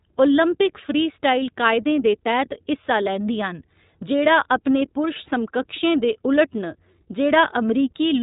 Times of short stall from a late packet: none

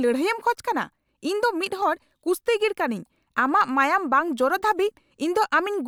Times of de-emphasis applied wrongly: none

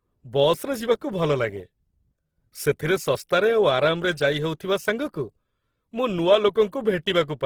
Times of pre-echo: none

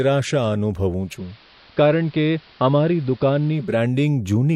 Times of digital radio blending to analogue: 0.95-3.85

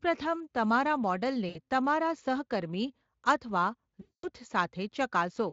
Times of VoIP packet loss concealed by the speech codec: 1.49-1.59, 4.01-4.28

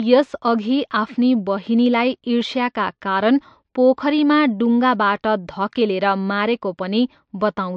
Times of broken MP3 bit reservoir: none

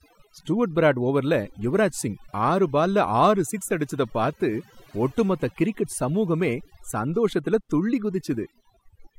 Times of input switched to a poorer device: none

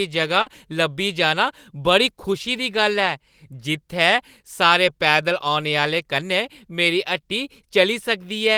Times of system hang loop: none

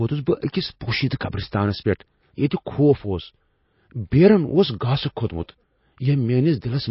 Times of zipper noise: none

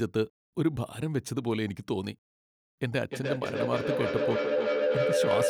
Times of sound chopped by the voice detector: none

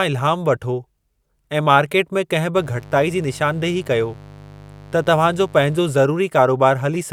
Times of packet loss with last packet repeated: none

